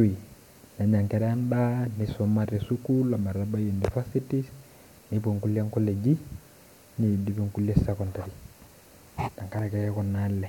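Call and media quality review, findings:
No technical faults found in the speech signal; nothing in the capture, processing or transmission path calls for follow-up.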